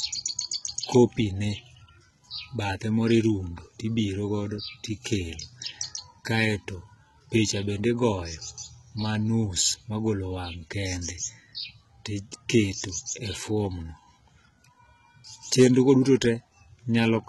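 Right from the start and through the whole clip, the speech carries heavy codec damage that sounds like HE-AAC compression. Nothing comes through above 11.8 kHz, and the treble that is there sounds rebuilt rather than recorded. That's likely spectral band replication: the top is patched in from lower bands and shaped only roughly, so it doesn't line up with the real harmonics below it. That shows up as gritty, lispy s sounds. The overall quality fits a very low bitrate, something in the region of 16 kbps.

Then there's hard clipping. A short blip at 12.50 s is overdriven by about 1 dB, and a longer stretch from 15.59 to 15.91 s is pushed by about 3 dB. In both spots the loudest parts of the waveform are sliced flat because some stage couldn't pass them, and those flat tops throw extra harmonics up high. You hear it as crackle riding on the peaks.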